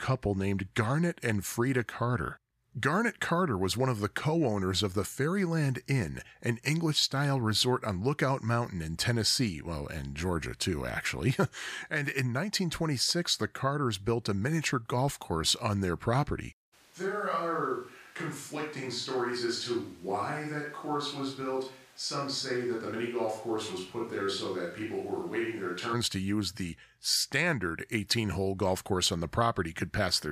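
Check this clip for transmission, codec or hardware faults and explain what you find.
One fault is audible. From 16.75 s, after "course on their property", to 25.92 s, before "to use the standard", the sound is likely a switch to a distant microphone. It turns hollow, roomy and thin, drops about 5 dB, and picks up room noise around 25 dB below the speech. Unlike added reverberation, it changes abruptly at both edges.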